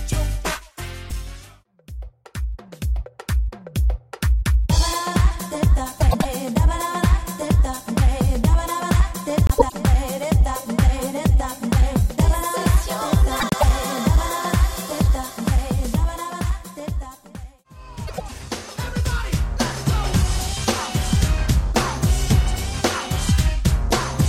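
At 6.00–6.25 s, 9.47–9.72 s, 13.40–13.64 s and 18.07–18.32 s, frames out of order swap two neighbouring 104.5 ms blocks, which fits four-frame runs. Each swap gives a garbled flutter. Unlike a dropout or a repeat, no time is lost or doubled.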